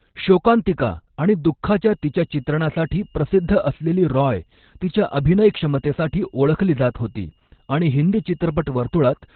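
From the start, the speech carries heavy Opus voice compression. The codec runs in its SILK mode at about 8 kbps, narrowband, so nothing is left above 4.3 kHz. The voice sounds muffled, hoarse and slightly robotic, with the excitation coded coarsely.

At 1.87 s, right after "शोकांतिका आणि", a feedback whistle begins and continues to the end. It is a thin, steady tone at 5.2 kHz, sitting roughly ten decibels under the speech and swelling and fading slowly in level. The likely cause is a loudspeaker-to-microphone loop held just short of runaway.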